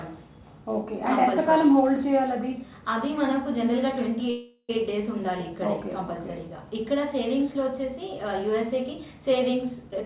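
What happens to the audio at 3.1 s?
Nothing goes wrong at 3.1 s: the audio continues intact, carried as usual by the narrowband call path with nothing above 4 kHz.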